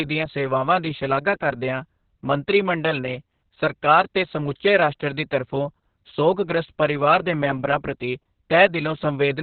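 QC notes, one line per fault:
throughout: Opus voice compression, speech muffled, hoarse and slightly robotic with nothing above 4.4 kHz, pointing to narrowband SILK coding at about 6 kbps.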